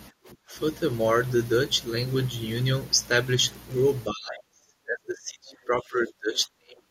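Right at 0.11 s the room tone ducks by about 23 dB for some 70 ms, until 0.18 s. That's background gated by the echo canceller, clamping the mic while the loudspeaker played. From 0.26 to 0.30 s there's a faint second voice, well below the talker, most likely the other side's voice leaking through because the canceller left some loudspeaker echo in the mic. Then the talker's voice drops at 0.46–0.54 s, roughly 15 dB, and again from 4.09 s to the end, around 30 dB deep. That's likely speech suppressed in double talk: both sides spoke together and the canceller turned everything down.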